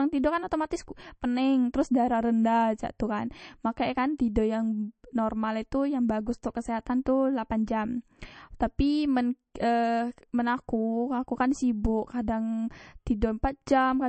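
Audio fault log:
throughout: MP3 compression, nothing above 8.3 kHz and a plainly audible watery swirl, likely an encoder starved of bits, as fits about 36 kbps.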